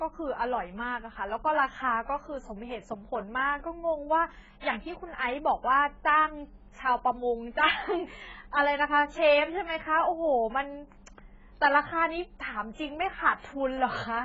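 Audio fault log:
Throughout: AAC compression, with dull, smeared speech, warbling sibilants and nothing above 7.6 kHz, likely from heavy coding near 12 kbps. The warble sets it apart from plain low-pass filtering.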